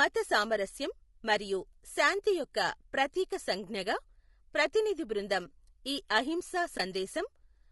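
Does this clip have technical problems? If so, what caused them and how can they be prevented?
Yes. Throughout the clip the speech sounds rough and grainy, with noise filling the gaps between harmonics and a thin, synthetic-sounding top band. This is low-delay AAC compression, likely AAC-ELD: its short frames resolve pitch harmonics poorly and spend bits inefficiently. The damage is plainly audible and fits a bitrate around 32 kbps. Raising the bitrate or choosing a codec mode with longer frames, where latency allows, would prevent it.

From 6.77 to 6.80 s, just after "ప్రతినిధి బృందం ఈ అహింసా", the sound fades into a brief soft-edged gap and back out. This is AAC frame loss with muting, consistent with a single lost frame of about 20 ms. The decoder zeroed that frame's spectrum, and the overlapping windows smoothed the edges. Transport with retransmission, forward error correction, or decoder-side concealment that extrapolates the missing frame would prevent it.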